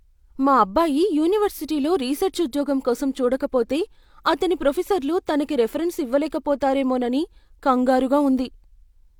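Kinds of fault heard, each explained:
No technical faults can be heard in the recording.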